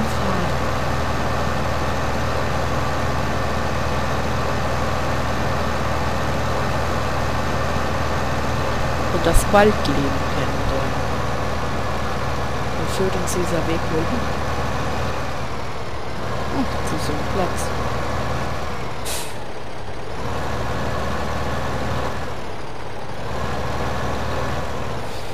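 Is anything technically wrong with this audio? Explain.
Yes. From 0.13 s to 23.82 s, clock drift buffer slips click every 1.69 s, about fifteen times, likely from two clocks differing by several hundred ppm.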